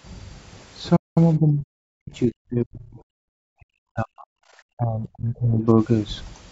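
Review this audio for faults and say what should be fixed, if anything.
A playback stall silences the speech from 0.96 to 1.18 s, about 0.2 s. The player likely ran short of data, then resumed. Larger playback buffering and an unblocked audio thread would prevent it.

Speech suppressed in double talk cuts the speech at 1.38 to 2.99 s, 3.34 to 4.34 s and 4.77 to 5.67 s. It drops by about 40 dB in the first two spans and about 30 dB in the third. The echo canceller likely mistook the talker for loudspeaker echo. Better double-talk detection or a less aggressive suppressor would prevent it.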